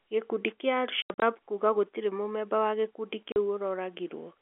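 From 1.02 to 1.22 s, before "kuga gũtirĩ mũmeba wa", packet loss filled with silence leaves scattered holes totalling 140 ms, fitting 20 ms packets. A 40 ms hole follows "gũtirĩ mũmeba wa gĩkundi" at 3.32 s. Edges are hard, showing as flat waveform gaps and blank spectrogram bands.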